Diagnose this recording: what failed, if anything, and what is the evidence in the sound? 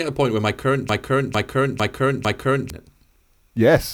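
Right after "point where my current", at 0.89 s, the speech catches on a fragment about 0.45 s long and replays it exactly, back to back, four times until 2.70 s. Nothing new is heard in that stretch. This is a broken-record loop, likely from a stall at the buffer or playback stage: the player or stream stopped receiving fresh data and kept re-sending the last block it held, so the audio for that span is lost.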